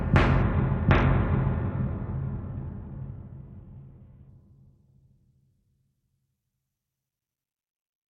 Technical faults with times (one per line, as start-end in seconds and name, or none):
0.42-4.29 Bluetooth SBC bit pool drop